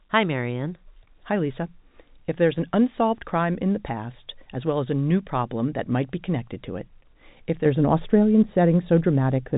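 From 7.66 s to the end at 9.57 s, the speech turns dull and muffled from de-emphasis applied wrongly: a treble cut meant to reverse pre-emphasis hit audio that lacked it or was applied twice, tilting the response smoothly downward, about 11 dB at 10 kHz relative to 1 kHz, on top of the telephone band's 3.8 kHz ceiling.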